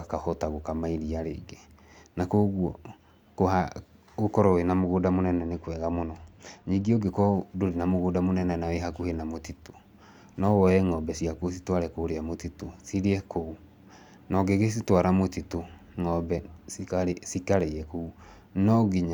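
From 4.81 to 7.05 s, just before "ndũrĩ na mũgũnda mũnene", channel delay (comb filtering) dulls the speech: one channel lags by a couple of samples, and the mono sum cancels a fixed notch near 10 kHz. Unlike a low-pass roll-off or a sweeping flanger, this notch is fixed.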